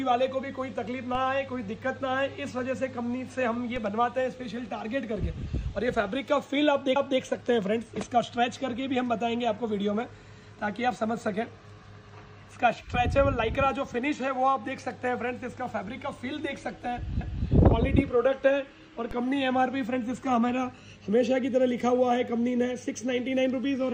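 DC steps at 1.15 s and 3.76 s: the waveform's zero line jumps abruptly, as if an offset were suddenly switched into the input. Each jump is heard as a brief low thump under the unchanged sound. The offset then drains away quickly, at a rate that fits a high-pass filter around 20 Hz.

Overlapping chunks at 6.96 to 7.21 s and 17.21 to 17.46 s: the audio was handled in 10-second blocks, and each new block began 250 ms before the previous one finished. That quarter-second of sound plays twice at the join, giving a click or stutter.

DC step at 19.11 s: the same abrupt baseline jump returns, again heard as a low thump that dies away quickly as the offset decays.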